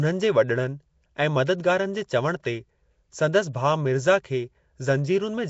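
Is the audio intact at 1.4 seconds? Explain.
No. At 1.4 s, as throughout, the speech sounds rough, hissy and smeared, with nothing above 7.7 kHz. The likely cause is Nellymoser compression, which fills bit-starved bands with noise.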